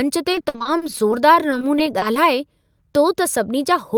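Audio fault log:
0.32–2.17 s, repeated packet loss (robotic sound): The speech breaks up into many short holes, which points to a couple of dozen lost or late packets. Each hole is patched by stretching the last bit of sound forward. That repetition gives a robotic tone. About 410 ms is filled this way, around 22% of the stretch. Another 330 ms is simply missing, so the speech also sounds choppy. The longest gap lasts 60 ms.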